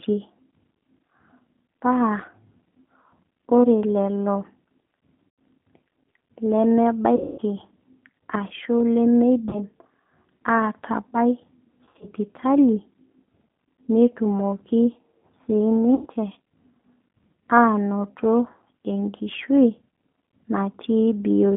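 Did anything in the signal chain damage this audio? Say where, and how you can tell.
Yes. At the codec stage, the whole clip has passed through the G.729 codec, almost certainly the G.729A variant at 8 kbit/s. The band is confined to roughly 200 Hz to 3.5 kHz. The coding damage is plainly audible: the speech sounds slightly rough and synthetic, as if rebuilt from a filter and a few pulses. A plain telephone-band filter would narrow the sound just as much but leave it smooth. That grainy, buzzy texture is what marks a low-rate model-based coder.

At the network stage, packets were lost and the speech codec concealed them with its packet loss concealment at 5.34 to 5.38, 7.16 to 7.40, 9.49 to 9.61, 11.85 to 12.06 and 15.95 to 16.07 s. The losses cover about 100, 220, 40, 100 and 60 ms, which fits 20 ms packets. At 11.85 s the loss is scattered over 160 ms, with a longest run of 60 ms. Each gap is filled by stretched sound, a buzzy tone or coloured noise that fades, and the voice stays weak for a moment after the packets return. 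Plain dropouts would give silence or clicks instead.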